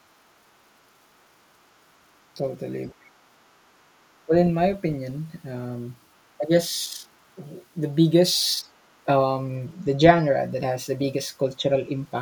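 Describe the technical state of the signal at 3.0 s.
At 3.0 s the speech is being suppressed in double talk. The dip runs from 2.93 s to 3.19 s. Over that span the level falls by around 30 dB at its deepest, so the speech nearly vanishes for about a quarter to a third of a second. The likely cause is an echo canceller faced with both ends talking at once. Unable to tell the near talker from the returning echo, it pulled both down together.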